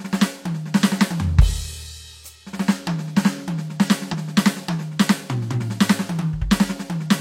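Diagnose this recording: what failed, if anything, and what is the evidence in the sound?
Damaged data in a compressed stream, from 4.09 to 4.14 s, a roughly 50 ms glitch cutting into the music at the codec stage. Corrupted bytes made the decoder misread those frames, lose sync and hunt for the next valid frame header.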